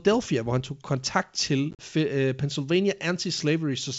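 Packet loss on an ADPCM call strikes between 1.71 and 1.84 s, right after "han tog kontakt til": about 60 ms of packets go missing across roughly 80 ms, the longest unbroken gap 40 ms, which fits a handful of short packets. Silence fills the holes, and the decoder's predictor and step size drift away from the sender's, so the speech drops out with hard edges, then resumes with brief distortion before the 64 kbit/s G.722 wideband sound settles.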